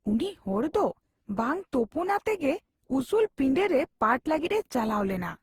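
Speech, likely re-encoded with Opus about fifteen times at what sounds like 48 kbit/s, causing generation loss throughout: a swirly, hollow, smeared sound with blurred attacks, with content reaching 20.2 kHz.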